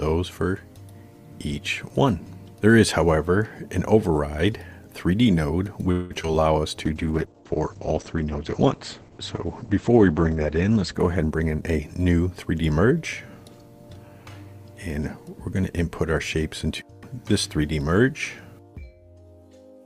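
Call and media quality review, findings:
Choppy, robotic stretch, 5.91–6.35 s. Repeated packet loss: four gaps, longest 190 ms, about half the span filled by extending the last sound, 80 ms simply missing. Network-side loss or late arrival, receiver concealment.

Drawn-out, slowed sound at unchanged pitch, 6.40–6.61 s, running at 81% speed. Jitter buffer slow-down: receiver repeated pitch-period-sized pieces, adding 51 ms to rebuild its reserve right after the loss burst.

Rough, watery, muffled sound, 6.86–12.57 s. Call bitrate drop from 48 to 10 kbps, held at the floor for 3.6 s; audio bandwidth narrows from 20 kHz to 8 kHz. Bandwidth estimator cut the encoder's budget; coarser Opus coding plus lost highs.

Hurried sound at the same pitch, 11.22–12.43 s, running at 115% speed, overlapping the low-bitrate stretch. Jitter buffer speed-up: receiver trimmed short pitch-period pieces, roughly 0.2 s in total, to drain excess buffered delay.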